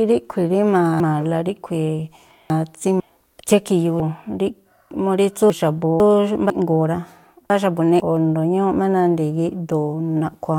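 A half-second block of audio was delivered late and written after the blocks that should have followed it, so the speech plays with chunks out of order three times. Between 1.0 and 3.0 s and again between 4.0 and 6.0 s, the 500 ms chunk lands three places late. Between 6.5 and 8.0 s it is two places late. Nothing is missing, but each span is reshuffled, with three hard joins, and sounds garbled and jumbled.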